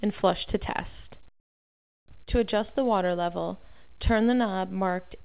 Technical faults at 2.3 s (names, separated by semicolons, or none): short concealed packet loss